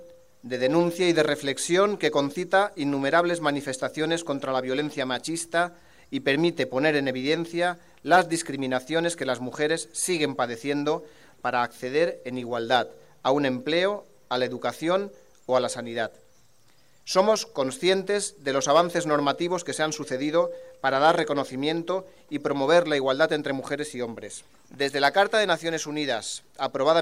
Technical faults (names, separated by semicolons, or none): none